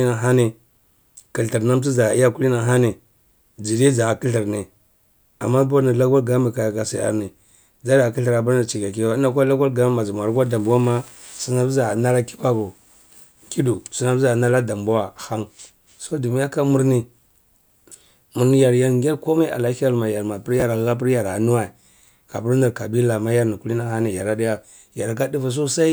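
At 20.6 to 20.62 s, chunks out of order: a 10 ms chunk plays one slot late, giving a brief jumbled moment where, unlike a dropout, no audio is missing.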